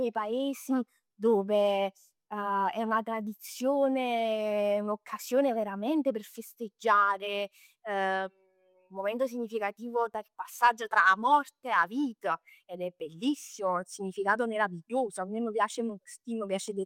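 No technical faults can be heard in this speech recording. No event stands out anywhere along its timeline.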